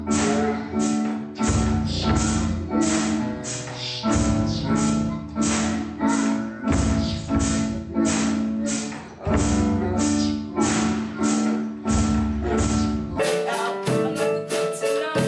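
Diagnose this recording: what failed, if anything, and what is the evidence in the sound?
Wrong sample rate, 0.0 to 13.19 s, at playback: the sound runs at half speed and a full octave (12 semitones) low, which fits 48 kHz material clocked out at 24 kHz without conversion.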